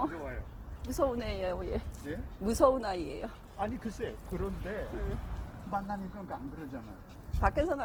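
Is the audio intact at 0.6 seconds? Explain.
No, at 0.6 seconds the sound is grainy and rough, as it is throughout the clip, which is plainly audible Opus compression, likely in its music (CELT) mode. Starved bands are being filled with folded or noisy content, pointing to a rate around 16 kbps, even though the bandwidth still reaches about 20.2 kHz.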